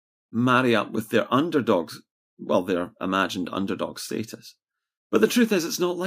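No technical faults can be heard at any point in the speech, so there are none to describe in time order.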